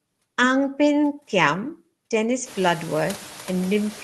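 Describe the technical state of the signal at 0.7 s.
At 0.7 s a noise suppressor is at work, as it is across the whole clip. Frame by frame it pulls down each frequency band it judges to be steady background, by about 15 dB, and relaxes that cut when speech energy fills the band. The background therefore dips in the gaps and swells back under the voice. The call-path coding above it tops out near 12 kHz, consistent with an Opus link.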